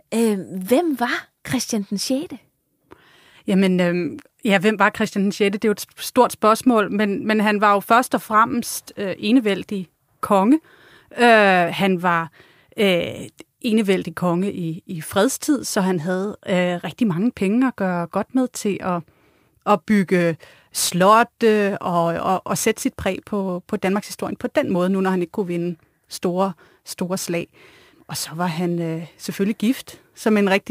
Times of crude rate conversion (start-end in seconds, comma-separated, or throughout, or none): 19.74-30.70